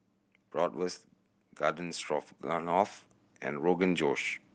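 From 1.57 to 4.18 s, automatic gain rising: the gain control judges the input too quiet and gradually lifts speech and background together by about 8 dB. The waveform envelope widens steadily and the spectrogram brightens evenly, though its content still stops near 12 kHz at the call codec's band limit.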